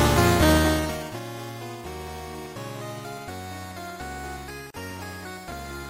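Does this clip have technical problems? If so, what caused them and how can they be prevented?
Yes. Throughout, the treble is cut off and the sound turns watery and swirly, with smeared attacks. This is likely MP3 compression at a low bitrate, around 64 kbps. Encode at a higher bitrate or keep a lossless master.

From 4.70 to 4.74 s, a 38 ms gap opens in continuous sound. This is a gap at a join of encoded pieces: each piece kept its encoder delay and end padding. Trim the delay and padding when joining, or encode in one pass.

From 5.48 to 5.52 s, a brief jumbled moment is heard. These are chunks out of order: a 10 ms chunk plays about three chunks late. Buffer and reorder chunks by sequence before writing or playback.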